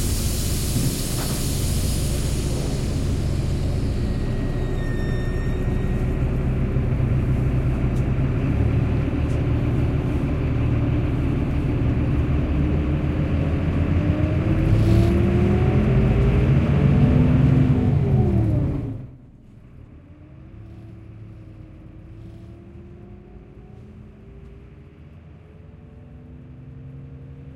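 Nothing technically wrong can be heard in this recording of sounds. Where the level rises or falls, it does so gradually, as if a fader were being moved.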